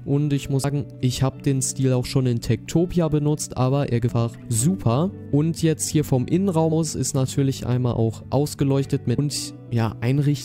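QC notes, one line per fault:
0.63 s, 4.09 s, 6.71 s, 9.17 s: damaged data in a compressed stream. Corrupted frame bytes make the decoder misread them and resync, producing brief chirps or blips.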